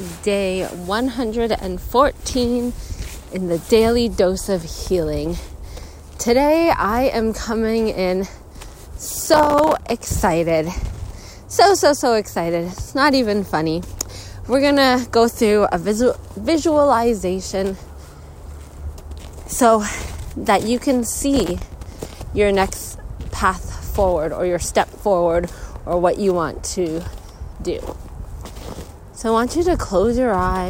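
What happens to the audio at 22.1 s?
At 22.1 s the audio is at the tail end of a burst of processor overload crackle that runs from 21.36 to 22.12 s. The processor keeps falling behind on its tiny audio buffers, each only a few milliseconds long, and misses dozens of deadlines in quick succession. Every missed buffer drops out as a sliver of silence with hard edges, and the rapid string of dropouts is heard as a gritty, tearing crackle over the sound that stops as the load eases.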